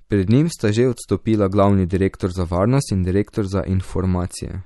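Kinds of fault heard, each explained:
MP3 compression: The speech is plainly degraded throughout, with nothing above 11.8 kHz and a watery, swirling quality. This is likely MP3 coding under a tight bit budget, consistent with a rate around 48 kbps. The encoder discards the top band at a fixed cutoff and drops weak spectral lines that flicker in and out between frames. That flicker produces the swirl and metallic edges on sibilants, and consonant onsets are softened.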